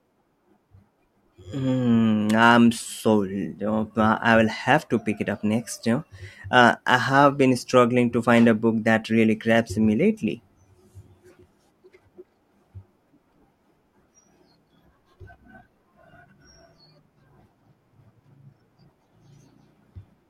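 Nothing in the speech stands out as a technical fault anywhere along the way, so there's simply no problem to point to here.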